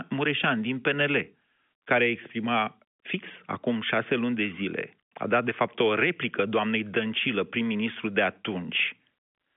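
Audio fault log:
No faults found; the speech sits on an ordinary G.711 mu-law telephone path at 64 kbps, with the line band running from about 200 Hz to 3.5 kHz and nothing above 3.7 kHz.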